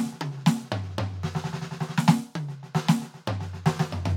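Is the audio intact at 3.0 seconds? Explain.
Yes, at 3.0 seconds the music plays through intact, with no dropout, click or other fault at that moment.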